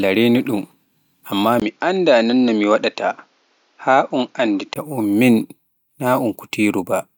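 Input switched to a poorer device from 1.6 s to 4.76 s in this speech clip: a 20 ms gap opens at 1.6 s, then nothing above 7.1 kHz gets through and a faint new noise floor appears while the level barely changes, likely a second microphone taking over before the original returns.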